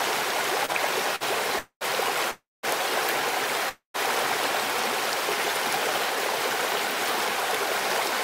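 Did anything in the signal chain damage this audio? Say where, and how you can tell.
Yes. Network stage: short stalls from late packets at 0.65 and 1.16 s hold the last sound for 30 and 51 ms, then resume with nothing lost.

Network stage again: call audio freezes at 1.59–1.83, 2.31–2.65 and 3.69–3.96 s stretch sound into a fading buzz or hiss then silence, likely from delayed packets emptying the jitter buffer.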